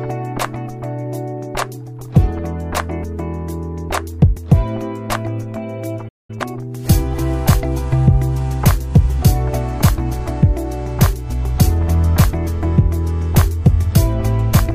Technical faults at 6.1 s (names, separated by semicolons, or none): playback stall